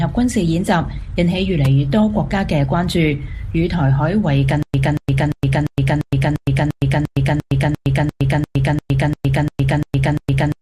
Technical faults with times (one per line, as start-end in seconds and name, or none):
4.63-10.61 stutter with silent gaps